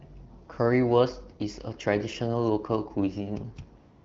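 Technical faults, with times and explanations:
3.79–4.04 s, AMR comfort noise: the phone stopped sending speech frames for the last quarter second, and the receiver substituted smooth synthetic noise for the real background.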